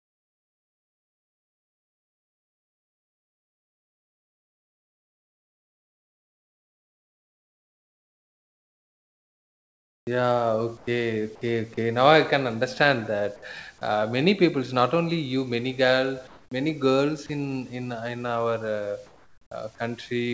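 Speech heard through a call link whose audio stops above 8 kHz, which fits a wideband codec such as G.722 at 64 kbps, with room noise about 38 dB below the speech. For the first 11.8 s the sound is chopped by the voice detector. Over that stretch roughly 10 s of real audio is swapped for comfort noise, so syllable edges vanish. The likely cause is the sender's detector repeatedly toggling transmission. This differs from a single dropout because the switching keeps recurring rather than happening once. Later the sound is dropped by the voice detector three times: 13.36–13.42 s (60 ms), 17.26–17.29 s (30 ms, right after "many girl many girls"), and 19.75–19.78 s (30 ms). Each time a brief piece of the signal itself gives way to steady noise and then returns. The likely cause is the detector mistaking a quiet tail for background. Unlike the long chopped opening, each is a single isolated gap. 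Comfort noise in place of the background appears at 16.27–16.51 s, between "only you many girl" and "many girls", and again from 19.06 to 19.78 s. In these stretches the textured room noise is replaced by smooth, featureless hiss, likely the receiver's filler during discontinuous transmission. Here no wanted sound is lost. The hiss sits about 32 dB below loud passages and only about 1 dB quieter than the real background.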